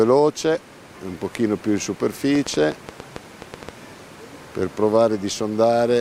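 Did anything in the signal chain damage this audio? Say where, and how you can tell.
Yes. A train of clicks runs from 2.35 to 3.70 s: around ten similar pulses at roughly 7.5 per second, unevenly spaced, standing about 10 dB above the signal. This points to the analogue stage, likely interference from nearby equipment or a faulty connection or power supply injecting repeated pulses.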